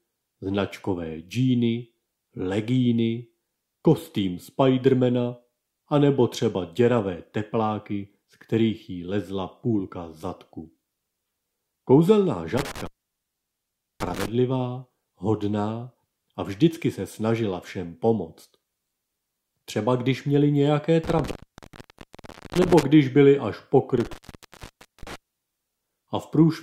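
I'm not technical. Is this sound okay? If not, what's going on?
No. An intermittent contact, a loose cable or plug, cuts the sound out at 12.6, 21.0 and 24.0 s for about a second each, with crackle at the edges and faint hiss between, not clean silence.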